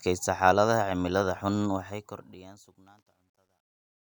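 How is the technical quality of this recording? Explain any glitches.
The recording has one glitch: the speech fade-out, which starts around 1.7 seconds, is degraded by truncation distortion on a fade from 1.66 s to 4.14 s. The fade stage drops low bits without dither, which fits 12-bit resolution. From 2.59 s to 4.14 s the tail turns gritty. On a waveform this looks like square staircase steps, and on a spectrogram it shows as broadband hash.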